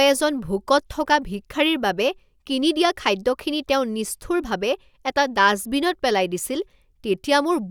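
No technical faults can be heard anywhere in this speech recording.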